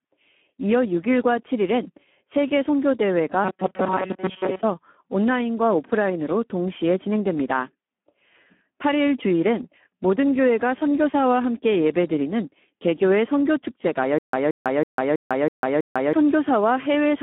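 Speex codec damage runs through the whole speech clip. The sound is hoarse and noisy, squeezed into a telephone band of roughly 200 Hz to 3.4 kHz with nothing above 3.8 kHz. This heavy excitation starvation fits a low setting near 8 kbps.

From 3.45 to 4.64 s there is robotic sound from repeated short buffers. A rigid metallic buzz at 188 Hz replaces most of the real audio. It most likely comes from a buffer of about 5.3 ms being replayed while incoming audio arrived too seldom.

From 14.19 to 16.13 s there is a stutter with silent gaps. A 176 ms fragment replays six times, each followed by about 148 ms of digital silence, giving an even 325 ms cycle. This points to a stalled stream whose retries likely re-played its last fragment before running dry.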